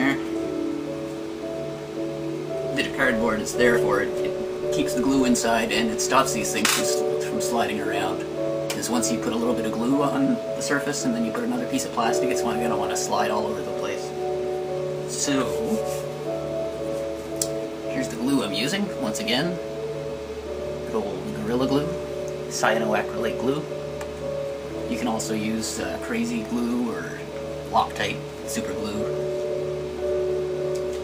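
Filter restarted on every block, from 2.87 to 6.49 s: a buzz at 86.1 Hz that tracks the sound's level. The filter drops its state at each block boundary and starts from silence, so every block opens with a transient. That rate fits a 512-sample buffer.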